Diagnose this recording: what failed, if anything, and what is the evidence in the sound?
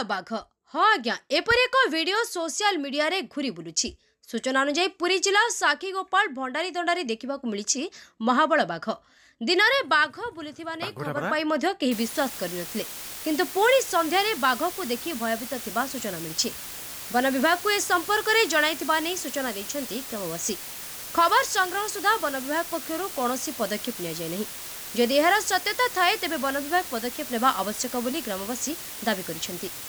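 From 11.92 s to the end, a steady, even hiss sits only around 10 dB under the sound, with no grit or distortion. That's low bit depth with dither at the sample-format conversion stage: a 5-bit requantise, with dither turning the rounding error into flat white noise.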